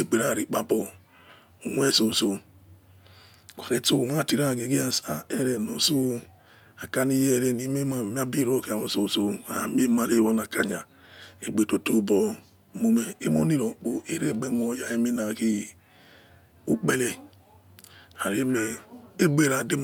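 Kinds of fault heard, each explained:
Nothing in this recording stands out as a technical fault; I listened for dropouts, glitches and distortion and didn't catch anything of the sort.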